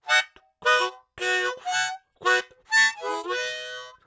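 No technical faults can be heard anywhere in this audio; the signal stays steady and intact throughout.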